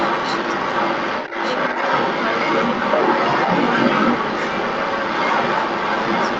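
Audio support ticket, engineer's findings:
Doubled audio track, throughout: likely a second, slower capture path or misaligned edit mixing in another copy. Full-band duplicate trails roughly a second behind, around 5 dB quieter, no decay or room colour, so everything repeats as a dry, stacked second layer.

Other side's voice leaking through, 0 to 6.4 s: likely incomplete echo cancellation of far-end loudspeaker playback. A second talker stays present across the whole clip at roughly 10 dB above the near-end speech, dominating it, alongside the 8 kHz Opus band limit.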